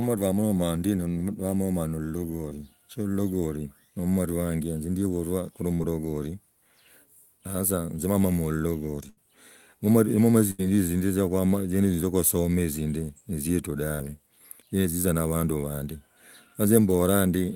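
Short concealed packet loss at 2.49–2.53 s drops about 20 ms, patched by extending the preceding sound, a quick smear that shows as a smoothed, repeated patch in the spectrogram. Bursts of packet loss at 5.75–5.82, 9.10–9.19 and 10.51–10.61 s lose 40, 80 and 80 ms. The last sound is held as a fading buzz or hiss, visible as a decaying waveform stretch, before jumping ahead. Another short concealed loss at 13.95–14.01 s briefly smears 40 ms.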